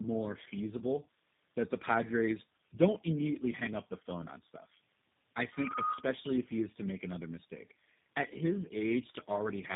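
Speech runs through tandem speech coding for the whole clip. The sound is rough, muffled and warbly, with nothing above 3.7 kHz. That points to three low-rate speech codecs in a row, likely GSM full rate twice and then G.729A, each re-coding the last one's damage. From 5.52 to 6.14 s there is a loudspeaker feedback squeal. A 1.2 kHz tone swells over about a third of a second to about 5 dB above the speech. A microphone is picking up its own loudspeaker, and the loop gain at that frequency exceeds one.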